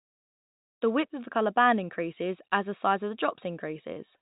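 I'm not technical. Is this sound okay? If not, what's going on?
Yes, this speech sounds fine.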